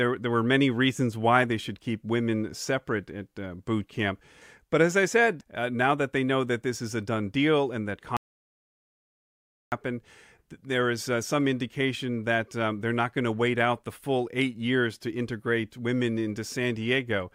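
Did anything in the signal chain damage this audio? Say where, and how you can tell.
Yes. An audio dropout to silence runs from 8.17 to 9.72 s, just after "done deal and that", where the speech stops mid-flow and about 1.55 s of silence follows, with no room tone at all. The input was likely lost upstream of the recorder, a disconnected device or failed link, while silence kept being written, so that stretch of speech is gone.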